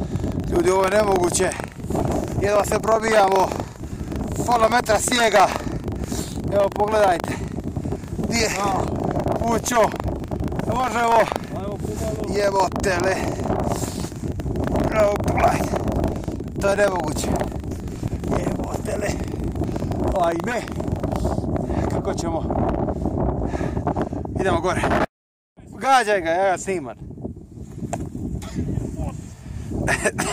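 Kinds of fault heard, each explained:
Buffer tearing, from 0.0 to 21.2 s: the software filling the ring buffer and the hardware draining it have drifted out of step, so their positions cross within every period. A small slice of each buffer still holds sound from roughly 150 ms earlier, butted against the current audio with hard joins. The result is a steady 25 Hz rattle, pointing to a buffer period of about 40 ms, heard only while sound is present.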